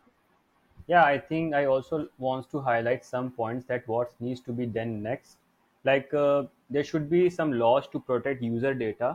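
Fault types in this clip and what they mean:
No technical faults can be heard anywhere in the speech. Nothing in the recording points to a problem in how it was captured, processed or delivered.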